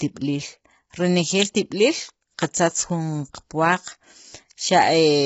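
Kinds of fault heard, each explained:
Low-delay AAC compression: Throughout the speech the sound is rough and grainy, with heavy coding damage and nothing above 7.7 kHz, likely from AAC-ELD at a bitrate around 16 kbps. Its short frames resolve pitch harmonics poorly, so noise fills the gaps between them. A plain low-pass filter would only dull the top, and a longer-frame codec would smear in time instead; here the grain fills the gaps between the harmonics.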